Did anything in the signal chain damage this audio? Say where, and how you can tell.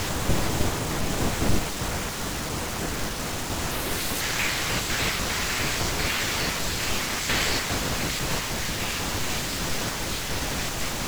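Yes, a sample-format conversion slip: from 3.71 to 4.21 s the speech jumps to double speed, an octave up, because the audio was read two samples at a time.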